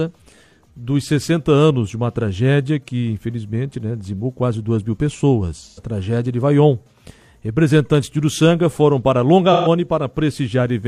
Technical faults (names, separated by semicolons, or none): AAC frame loss with concealment